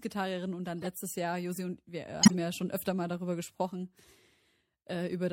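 Throughout the speech there is a watery, swirling quality, with sibilants turned to metallic chirps. This is MP3 compression, likely at a low bitrate around 64 kbps. The encoder ran short of bits, so it let weak frequency lines blink on and off between frames. Unlike a one-off glitch, this coloration never lets up. It follows every syllable.

Right after "und dann", from 0.82 to 0.87 s, a short glitch peaks at about -25 dBFS. From 2.22 to 2.35 s, just before "ja schon öfter mal", a longer and much louder burst peaks at about -10 dBFS. Both are a corrupt frame decoded: damaged bits led the decoder to place energy at the wrong frequencies across a few frames. A click is a single instant and a dropout is silence, but these bursts last roughly the length of a frame or a few frames, and then vanish.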